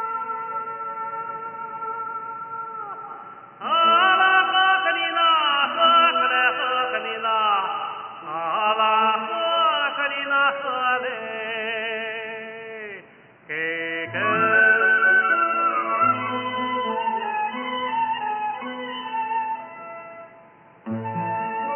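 Nothing in this audio stood out as a technical problem on listening.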